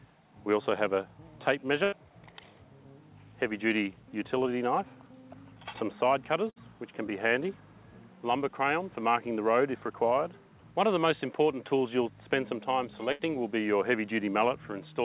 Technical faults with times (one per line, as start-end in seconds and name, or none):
1.84-1.94 burst of packet loss
6.50-6.58 burst of packet loss
13.12-13.21 burst of packet loss